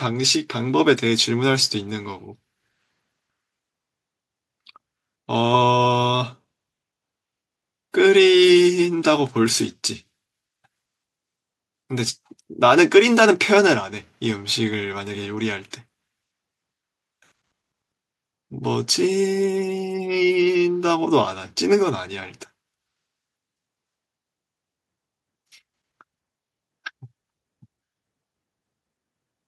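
Nothing in this speech recording stands out as a technical fault at any point, so there's really nothing to flag here.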